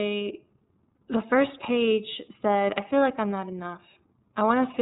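The speech has passed through the iLBC codec, which codes each 30 ms frame on its own and passes nothing above 4 kHz. Its plainly audible damage leaves the voice narrowband, rough and somewhat synthetic throughout, which fits the 13.33 kbps mode.

From 0.96 to 0.99 s there are lost iLBC frames. About 30 ms of data went missing, which points to a single dropped frame. The decoder filled the gap by repeating the last pitch cycle mixed with noise, heard as a brief held, buzzy vowel before the voice returns almost at once.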